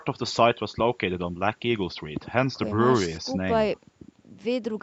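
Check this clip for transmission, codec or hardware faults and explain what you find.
Nothing here points to a problem: the speech carries the ordinary band limit of a call microphone and call path, with no content above 8 kHz, as expected from a wideband call codec.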